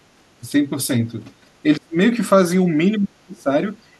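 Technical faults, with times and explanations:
0.41 to 0.54 s, 1.63 to 1.96 s and 2.98 to 3.52 s, speech suppressed in double talk: the speech level sags in three stretches. The first is a gentle dip of roughly 10 dB, and the later two go much deeper, about 30 and 35 dB, with the last lasting around half a second. That's likely an echo canceller unable to separate near-end speech from the loudspeaker echo of overlapping far-end talk, and clamping down on the near-end speech as well.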